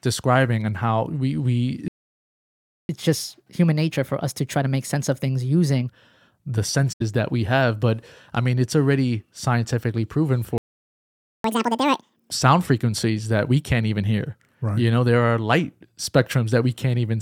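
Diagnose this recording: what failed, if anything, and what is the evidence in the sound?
Playback stall at 1.88–2.89 s, just after "and how we we", and again at 10.58–11.44 s: the audio goes silent for about 1.0 s and 0.86 s, likely a playback buffer underrun.

Catch-up at higher speed from 2.89 to 5.89 s at 1.15x, pitch up about two semitones. Then 11.44–12.31 s at 2x, roughly ten semitones higher, ending at "sound frequencies that we". The player resamples its backlog to recover lost time.

AAC frame loss with muting at 6.92–7.02 s: an 85 ms soft-edged hole, consistent with four lost frames. The decoder zeroed their spectra and the overlapping windows faded the sound out and back in.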